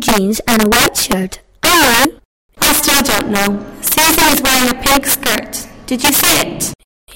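Violent, sharp cracks burst out on every loud peak across the whole clip, far harsher than ordinary clipping. This is integer overflow: the signal was pushed about 12 dB too hot, and instead of being limited, a small share of samples wrapped around to the opposite extreme.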